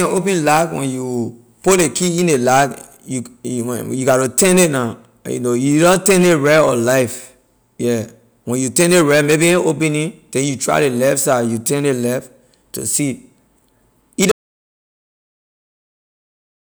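At 14.32 s the speech cuts off abruptly. An audio dropout to silence follows and lasts to the end, about 2.3 s. The gap is silent, with no room tone. The input was likely lost while recording continued writing silence.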